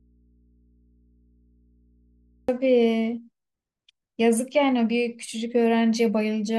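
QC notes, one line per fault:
0.00–2.49 s, audio dropout to a faint residue: already under way at the start, the speech is missing, leaving only mains hum roughly 35 dB down, likely from a live but disconnected input.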